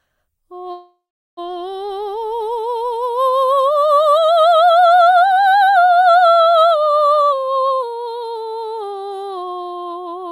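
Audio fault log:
0.71–1.39 s, call audio freeze: the music stops moving forward and the last instant is carried on as a fading buzz that settles into about 0.39 s of silence before playback resumes. The likely cause is packets held up in transit until the jitter buffer ran dry. When they arrive, the music picks up exactly where it broke off. About 0.66 s of filler has been inserted, nothing is lost, and everything afterwards plays that much later.
7.33–8.99 s, jitter buffer speed-up: the music runs at about 109% of its normal speed without any change in pitch, so the passage sounds hurried and the tempo no longer holds steady. The receiver had built up more buffered audio than it aims to keep and trimmed it back by repeatedly cutting out tiny slices, each a pitch period or a few. Over this stretch those cuts add up to roughly 150 ms.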